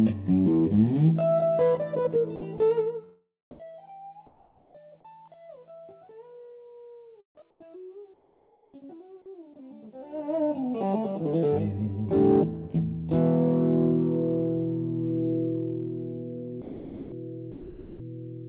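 From 2.36 to 2.6 s, the sender's voice detector likely toggled transmission on and off, producing sound chopped by the voice detector: about 80 ms of real sound is replaced by synthetic fill, so the passage stutters. Everything sits below 4 kHz, as expected from the G.711 A-law call path.

Four gaps show comfort noise in place of the background, each likely caused by discontinuous transmission substituting generated noise for the real ambience: 3.51 to 3.59 s, where the fill jumps about 11 dB louder than the background it replaces; 4.27 to 4.75 s, about 4 dB quieter; 7.5 to 7.6 s, about 2 dB quieter; and 8.14 to 8.74 s, about 9 dB quieter, where the real ambience drops into a smoother, steady noise.

From 16.62 to 18.0 s the detector likely switched repeatedly again. Nearly a second of sound is swapped for fill, so the sound chops audibly.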